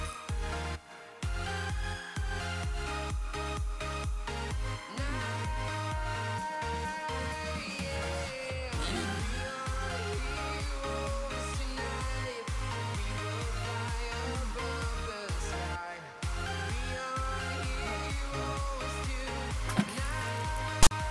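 At 20.83 s, near the very end, file tags are played as audio for about 80 ms, until 20.91 s. A block of text metadata was read as samples. It gives a loud, hard-edged rasp pushed to one side, then dead silence from the zero padding.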